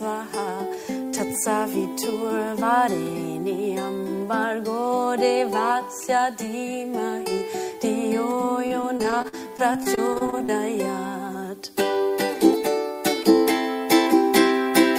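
From 8.67 to 10.5 s the audio breaks into repeated packet loss, heard as choppy, robotic sound. Nineteen short gaps, the longest 48 ms, are each patched by stretching the preceding sound, so about a fifth of that stretch is synthetic fill. On a spectrogram this appears as frequent vertical seams with smeared, frozen harmonic bands between them. The waveform shows copied cycles and abrupt joins instead of natural variation.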